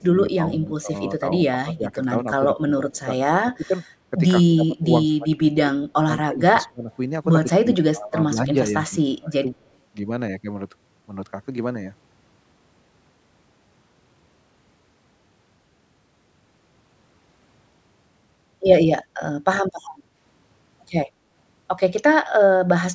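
From 0.0 to 0.9 s, then 1.63–3.1, 3.44–3.75, 4.48–6.91, 7.45–8.74 and 9.05–9.44 s, the speech dips by about 20 dB, about 25 dB at worst, in pieces. This is likely speech suppressed in double talk: the level drops rather than a second voice appearing. At 0.61–0.69 s and 6.61–6.95 s, a faint echo leak, likely, adds a copy about 30–35 dB down, delayed 158 ms and 168 ms.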